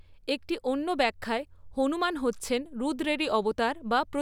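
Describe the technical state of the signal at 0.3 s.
The signal at 0.3 s is intact, with no dropout, clipping, glitch or other fault at that moment.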